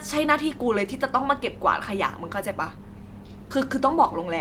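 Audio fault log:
No fault is heard anywhere in this speech recording, and the signal stays continuous throughout.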